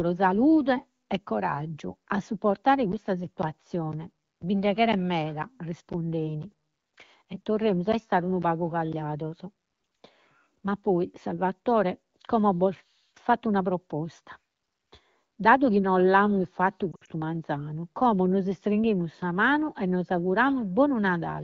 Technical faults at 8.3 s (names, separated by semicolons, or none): periodic USB or driver dropouts